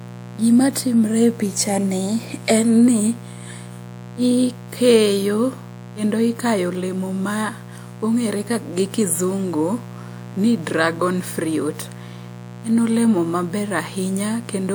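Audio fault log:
Throughout: mains buzz. A steady, raspy buzz sits under the speech at about 15 dB below it, built from 60 Hz harmonics reaching into several kHz. Sharp switching spikes, twice per mains cycle, from a dimmer, rectifier or unshielded cable leak into the signal path.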